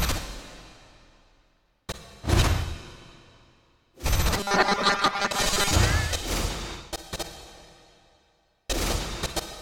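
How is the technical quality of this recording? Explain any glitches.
One glitch stands out. Robotic sound from repeated short buffers, 4.37 to 5.71 s: audio likely arrived too slowly, so about half the stretch repeats a 5 ms slice, forcing a rigid, metallic 200 Hz buzz.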